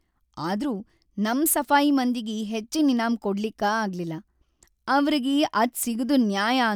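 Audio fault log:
No technical faults can be heard in this speech recording; the signal stays continuous and steady in level throughout.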